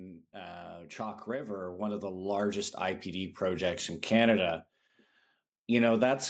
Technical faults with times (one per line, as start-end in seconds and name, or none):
0.31-4.38 automatic gain rising